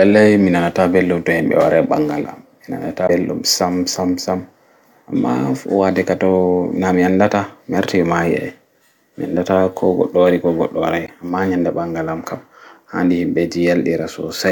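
Damaged data in a compressed stream appears at 3.06–3.10 s and again at 11.05–11.09 s in this speech: corrupted bytes make the decoder misread its frames and lose sync until the next frame header, leaving a brief 40 ms disturbance each time.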